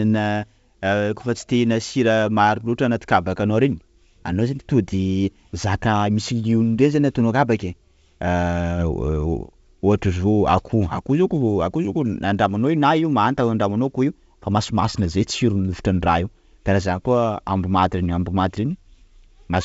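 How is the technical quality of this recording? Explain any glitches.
No glitches are audible anywhere in this speech recording.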